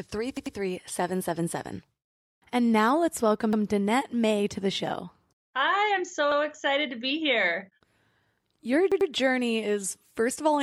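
Speech with repeated buffers: a roughly 93 ms chunk, consistent with a 4096-sample buffer, replays with hard joins when fresh audio arrives late. It plays three times at 0.37–0.56 s and 8.92–9.10 s, and twice at 3.53–3.62 s and 6.32–6.41 s, as stutters.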